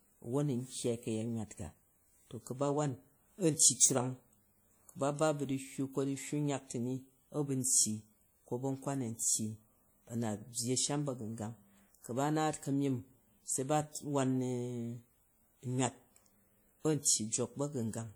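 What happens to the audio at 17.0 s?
Pre-echo appears from 17.02 to 17.05 s, a smear of about 28 ms ahead of a sharp speech onset. The transform coder spreads its quantisation noise evenly across each block, so noise sized for the loud attack also fills the near-silence just before it. You hear a short hiss leading into the onset, which makes it sound soft rather than crisp. On a waveform the attack's envelope rises early under a low fuzzy layer. On a spectrogram a broadband haze appears just left of the onset's vertical edge.

That smear sits inside a clip-wide layer of plainly audible compression damage, most likely from WMA compression at a low rate, around 48 kbps. The long transform blocks leave ringing and a washy quality, with hiss that swells and fades with the speech. Weak spectral detail drops out. On a spectrogram this shows as patchy, gapped upper bands and noise that rises and falls with each syllable rather than sitting as a steady floor.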